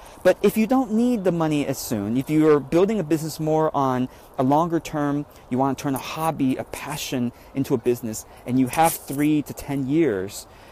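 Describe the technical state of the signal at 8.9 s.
Hard clipping occupies the stretch from 8.79 to 8.88 s, ending just before the 8.9 s mark. For about 90 ms the signal runs about 5 dB beyond what the stage can pass, so its peaks are sliced off flat. Those squared tops throw off high harmonics, heard as a brief harsh crackle on the loudest moments. Unlike soft saturation, which rounds peaks gently and adds warmth, the abrupt cut here produces a brittle, gritty edge.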